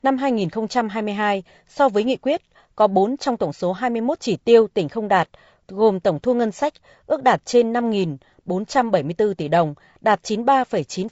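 Right through the speech there's a rough, grainy texture, with noise filling the gaps between harmonics. That's likely low-delay AAC compression: its short frames blur pitch detail, and the plainly audible damage fits a bitrate of around 32 kbps.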